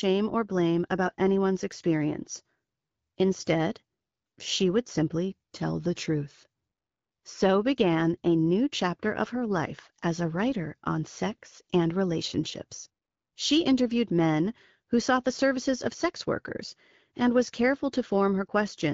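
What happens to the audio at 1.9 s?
Nothing goes wrong at 1.9 s: the speech runs on intact through the AMR wideband (HD Voice) codec at 12.65 kbit/s, with no dropout, click or distortion at that point.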